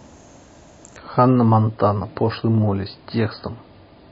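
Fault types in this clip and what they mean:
Adaptive stream at a lower bitrate: from 0.96 s to the end, the speech abruptly loses its treble and takes on a swirly, watery coding texture, with no gap at the switch. The player evidently fell back to a much leaner encoding, which fits a step down from a 128 kbit/s MP3 stream to one near 24 kbit/s. On a spectrogram everything above 5.1 kHz vanishes at that instant, leaving a flat ceiling. The waveform stays continuous.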